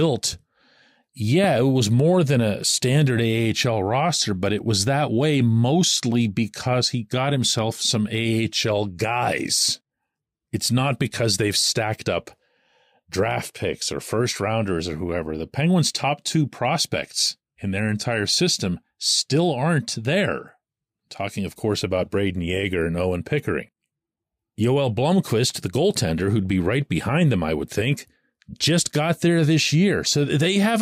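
A sudden voltage pulse, likely from a switch or static discharge, enters the chain at 1.44 to 1.46 s, producing a single loud pop a few decibels above the speech, just before "it was more than".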